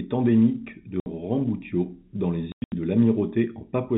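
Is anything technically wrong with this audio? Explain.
Yes. Packet loss filled with silence: the receiver lost packets, whose sizes fit 20 ms packets, and played silence in their place. At 1.0 s, right after "endémique de", a 60 ms hole opens. From 2.52 to 2.72 s, 180 ms vanishes in gaps up to 100 ms long, with hard edges.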